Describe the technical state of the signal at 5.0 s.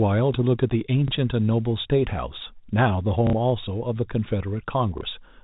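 Packet loss with last packet repeated, 4.98 to 5.01 s: a 30 ms packet is lost and the last packet is replayed in its place, heard as a small blip, seen as a duplicated waveform block with vertical spectrogram lines.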